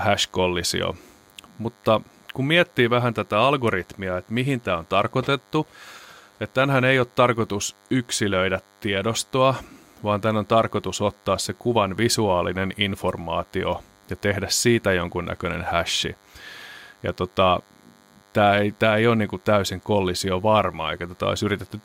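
From the first second to the last, a DECT cordless phone buzz sits under the speech: a thin, steady buzz repeating 100 times a second, roughly 35 dB below the voice. A nearby DECT handset or base station sends a radio burst every 10 ms, and the audio circuitry rectifies it into sound. Mains hum is a smooth low tone; this fault is buzzy and rasping, with a dense stack of harmonics.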